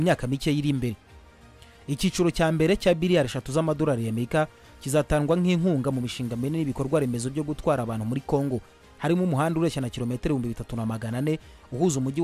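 Nothing is technically wrong with this audio.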